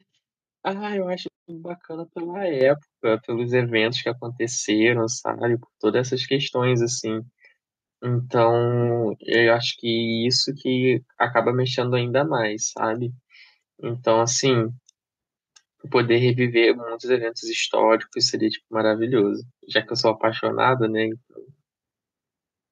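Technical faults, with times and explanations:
2.61 s: microphone volume stepped up. The call software judged the input too quiet and raised the microphone gain by about 7 dB in a single step, so speech and background noise jump louder together. The waveform envelope widens abruptly, and the spectrogram brightens evenly across all frequencies.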